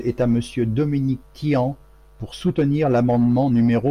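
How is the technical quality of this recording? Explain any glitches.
No glitches turn up anywhere in this short bit of speech, so there's nothing to explain here.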